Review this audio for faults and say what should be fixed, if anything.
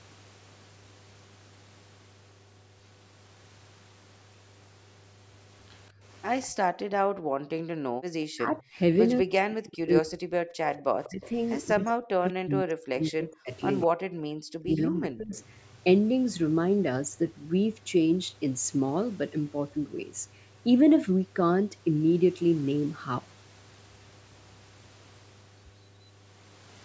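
The whole clip carries mains hum, a steady 50 Hz tone sitting roughly 30 dB below the speech. That's the power line bleeding in through a ground loop or a nearby transformer. Fixing the grounding, or moving the gear away from power supplies, should sort it.

There's a faint echo leak at 6.42 to 6.47 s and again at 15.39 to 15.44 s. A short copy of the far side comes back about 198 ms late, roughly 30 to 35 dB down. That's likely the speakerphone's echo canceller letting a bit of its own loudspeaker through. Better canceller tuning or a headset on that end would stop it.

The background gets gated by the echo canceller at 6.51 to 7.98 s, 10.57 to 10.65 s and 14.25 to 14.35 s. The room tone plunges by about 40 dB while the loudspeaker plays, then comes back once the canceller lets go. Gentler suppression or a headset would keep it steady.

Speech is suppressed in double talk at 8.26 to 10.29 s, 11.05 to 13.97 s and 14.63 to 15.37 s. 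The talker dips by up to around 40 dB, less in the last stretch, while both sides speak. The likely cause is the canceller muting everything because it can't separate the near voice from the echo. A canceller with proper double-talk handling, or headsets, would fix this.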